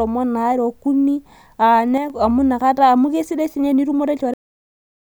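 From 1.98 to 2.10 s the level falls abruptly by about 6 dB, a brief dip that sounds like the speech momentarily getting quieter. This is most likely one channel dropping out before the mono sum; the waveform shows a sudden, short step down in amplitude.

At 4.34 s the audio is a cut-off end: playback stops mid-sound because the final buffers never arrived. The speech ends abruptly in digital silence with no decay, and the waveform and spectrogram go flat at once.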